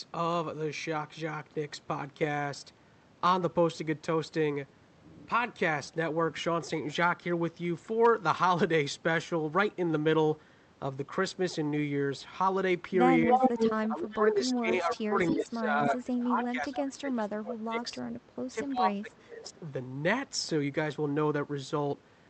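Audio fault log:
13.29–13.4 s, 13.87–18.04 s and 18.49–19.48 s, speech suppressed in double talk: the voice itself dips and breaks up while the far side is also talking. The drop is about 10 dB in the first short stretch and as deep as about 20 dB later, where roughly 3 s of the long span and about 0.7 s of the last one are affected. The likely cause is an echo canceller that cannot separate near speech from loudspeaker echo and turns both down. Unlike an echo leak, nothing extra is heard. The talker simply thins or drops out.
13.29–13.78 s, 14.15–14.2 s, 16.76–16.81 s and 19.18–19.23 s, echo leak: a delayed copy of the voice comes back. It arrives 290 ms late and about 5 dB above the speech in the first burst, then as brief 313 ms-delayed scraps about 25, 10 and 35 dB below it. This is likely loudspeaker pickup that the far side's canceller failed to remove. Unlike the suppression, this adds sound: an audible repeat, not a loss of the original.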